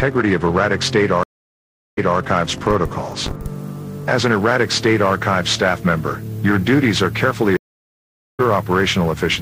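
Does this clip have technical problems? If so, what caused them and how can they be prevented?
Yes. Two stream reconnects occur. At 1.23 to 2.18 s the connection drops, leaving 0.74 s of silence, and a fresh decoder resumes about 0.21 s earlier from a resent burst. At 7.57 to 8.41 s, 0.82 s of silence ends with playback about 0.7 s later in the stream. A larger client buffer with automatic reconnection and seamless resume would prevent both.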